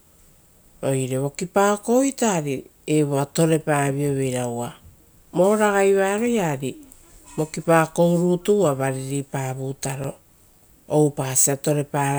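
At 10.04 s, the output was replaced by a block of digital silence lasting 5.3 ms, a length that fits one 256-sample buffer. The speech cuts out and returns with no fade, so the abrupt edges produce a short, sharp tick.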